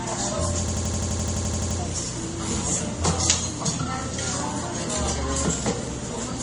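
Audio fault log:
Throughout: mains hum. A steady 60 Hz tone with a few low harmonics sits under all of the audio, roughly 30 dB below the signal. It does not change in level or pitch, so it comes from a constant electrical coupling rather than the sound source. A ground loop between devices or a nearby transformer induces the power-line frequency into the signal path, and the signal carries that interference for the whole length of the recording.
Throughout: transcoding between lossy codecs. Nothing is present above 10.5 kHz. The texture of the artefacts is mixed rather than uniform. This is likely the result of several low-bitrate passes, with MP3, then Vorbis, then MP3 again, each at rates in the 30 to 50 kbit/s region. Every stage spends its bits re-encoding the previous stage's errors and adds its own, and the lowest bandwidth cut-off in the chain remains.
0.68–1.79 s: system hang loop. 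An 85.33 ms fragment repeats exactly, about 13 times in a row, producing a mechanical stutter at 11.7 Hz before normal playback resumes. No audio is dropped around the event. The loop length fits a 4096-sample buffer at 48 kHz. The host or driver stalled while the audio hardware kept cycling through its ring buffer, replaying the same stale contents until fresh data arrived.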